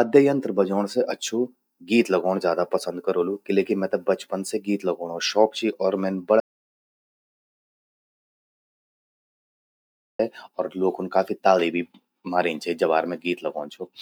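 A speech clip with an audio dropout to silence. After "चि और मौन" at 6.40 s, the sound cuts to silence, with no room tone. It returns at 10.19 s on "और ल्वोखूंन काफी ताली". About 3.8 s of speech is gone. The input link was likely lost while recording continued.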